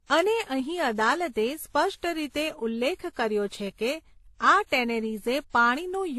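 Speech that sounds like transcoding between lossy codecs runs through the whole clip: the smeared, swirly high end of a low-rate spectral-band-replication codec sits under the added artefacts of later encodes, which points to something like HE-AAC, then AAC-LC, then WMA. On a spectrogram, energy stops flat at about 12.1 kHz throughout, the lowest cut-off surviving the chain. Above that the spectrogram is empty, with patchy, blocky texture below, likely from each encoder re-spending bits on earlier artefacts.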